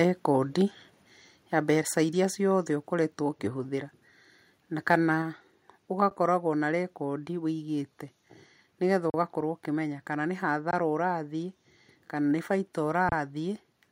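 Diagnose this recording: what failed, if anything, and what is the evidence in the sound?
Microphone volume stepped down, at the call-processing stage. Level drops abruptly at 2.04 s, 3.06 s and 5.22 s, by about 2, 1 and 2 dB. Automatic input-gain control likely lowered the device volume.

Microphone overload, at the converter input. From 4.9 to 4.96 s, peaks run about 1 dB past the converter's limit. A few flattened tops add harsh crackle, likely from excessive input volume.

Underrun with held sample, in the playback buffer. The waveform freezes flat at 6.1, 9.1, 10.71 and 13.09 s, for 10, 40, 20 and 30 ms. Playback then resumes with only a soft click.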